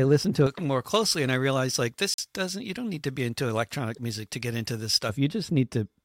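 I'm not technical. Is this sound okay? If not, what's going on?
No, there are two problems.

From about 0.47 s to 5.09 s the speech sounds thin, bright and hissy on the s sounds. That's pre-emphasis left on: the treble was boosted for recording or sending, and the step that should tone it back down was skipped.

At 2.14 s to 2.19 s the sound drops out for roughly 45 ms, then picks up as if it had kept playing. That's most likely a Bluetooth dropout, where a few chunks of audio didn't reach the headphones in time and were skipped.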